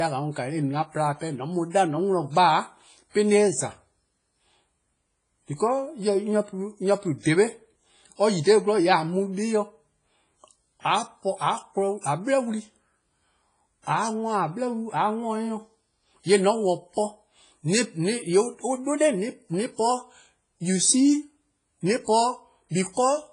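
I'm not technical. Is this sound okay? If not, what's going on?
No. The whole speech clip has a watery, ringing smear with hiss that swells and fades with the voice, and nothing above about 10 kHz, likely from heavy WMA compression.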